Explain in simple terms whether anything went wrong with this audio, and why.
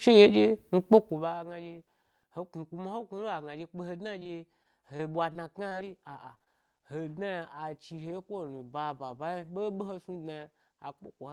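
Yes, there is repeated packet loss (robotic sound) from 4.19 to 5.73 s and again from 6.35 to 6.82 s. Many tiny holes, none longer than about 23 ms, get patched by stretching the previous sound, so the speech turns choppy instead of briefly dropping to silence.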